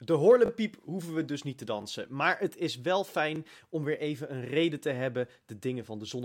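Repeated buffer at 0.46–0.50 s, 1.82 s and 3.36 s: late audio made the last chunk replay (twice at first), giving brief buzzy stutters fitting a 20 ms buffer.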